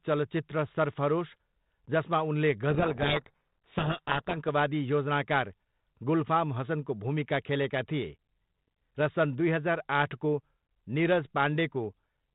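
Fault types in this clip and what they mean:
codec payload misread: from 2.7 to 4.37 s the G.726 code words arrive with their bit order swapped, so the decoder buries the speech under harsh distortion.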